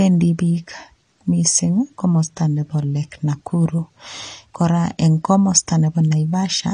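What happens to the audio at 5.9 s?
At 5.9 s, as throughout, the speech sounds dull, smeared and fizzy with nothing above 9.8 kHz, likely from coarse AAC compression at a low bitrate, around 32 kbps.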